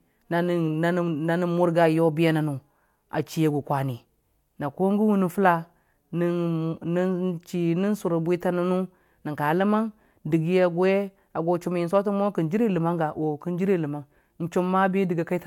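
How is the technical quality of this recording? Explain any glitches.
No audible glitches or technical faults in this recording.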